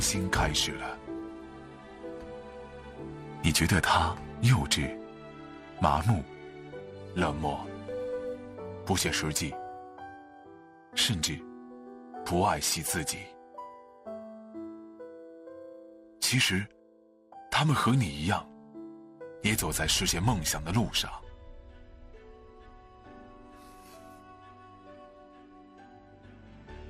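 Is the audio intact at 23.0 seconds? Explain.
No. At 23.0 seconds, as across the whole clip, the sound carries plainly audible MP2 compression damage, likely from MPEG Layer II coding at a low rate. The coder splits the sound into 32 equal sub-bands and, starved of bits, switches upper bands off and quantises the rest coarsely. The result is dull and gurgling, which fits a rate around 80 kbps. A plain low-pass filter would dull it evenly, without these flickering bands and granular texture.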